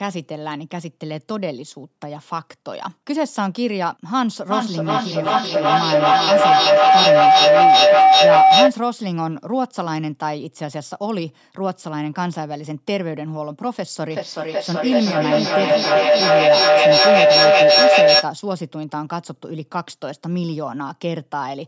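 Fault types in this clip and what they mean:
feedback howl: a tone near 700 Hz swells to about 11 dB over the speech, with the loop repeating every 0.4 s or so, as a mic-to-loudspeaker loop gains level each pass.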